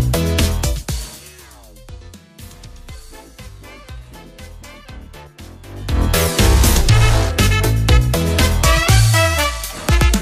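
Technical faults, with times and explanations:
No technical faults can be heard in this clip. Any rise or fall in level moves smoothly, as a fader would.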